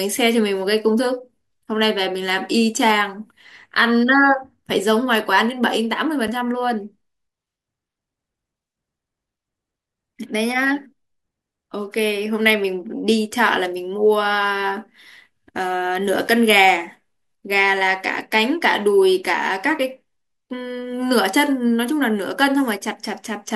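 At 6.28 s and again at 16.28 s the speech drops out for about 6.5 ms, a gap between chunks. The audio was split into 10-second chunks and silence was inserted at each join, so nothing is lost but each seam is audible as a brief hole.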